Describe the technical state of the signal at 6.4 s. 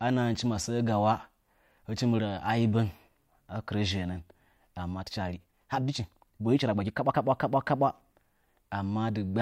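At 6.4 s the audio sits inside a time-stretched section running from 4.90 to 7.16 s, where the speech suddenly moves about 1.54 times faster yet keeps its normal pitch. That combination is what separates it from a simple playback-speed error, which would raise the pitch along with the pace. The likely cause is software squeezing this stretch to fit a shorter length by dropping short slices of sound, which leaves it rushed.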